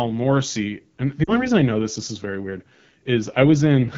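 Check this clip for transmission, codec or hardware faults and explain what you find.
There are two problems here: plainly audible low-rate wideband codec damage across the whole clip, and a short dropout from lost frames a bit past the one-second mark.

The AMR wideband (HD Voice) codec is audible throughout. The speech has a rough, raspy edge, which fits one of the low AMR-WB modes, around 8.85 kbit/s. At that rate the pulse-driven vocal tract model is too coarse to stay clean.

Lost AMR speech frames show up from about 1.24 to 1.48 s. The decoder covered about 40 ms of missing audio, which fits a couple of failed frames, by replaying the last good pitch and vocal tract settings at falling gain. You hear a brief dip toward near silence, and then the speech comes back rough for a moment.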